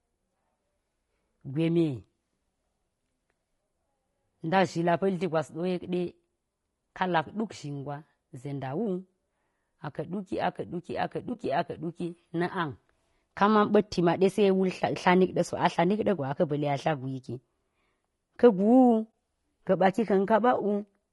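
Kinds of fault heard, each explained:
Low-delay AAC compression: The speech sounds rough and grainy throughout, with noise filling the gaps between harmonics and a thin, synthetic top band. This is likely AAC-ELD near 32 kbps. On a spectrogram, harmonic lines look smeared and the upper band patchy.
AAC frame loss with muting: Decoded spectrum was zeroed for a lost frame, so overlapping windows fade the sound out and back in. This happens at 11.33–11.37 s and at 19.13 s, each fitting one 20 ms frame. The waveform shows brief tapered dips.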